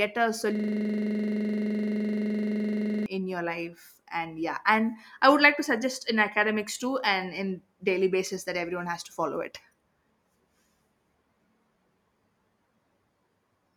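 A system hang loop runs from 0.55 to 3.06 s. The playback stalled while the hardware kept replaying one 42.67 ms slice of speech, which fits a 2048-sample buffer, repeating it dozens of times as a rapid, rattling buzz at 23.4 Hz.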